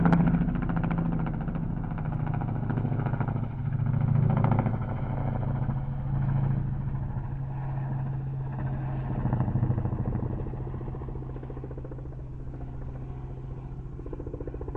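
No technical faults can be heard anywhere in this audio.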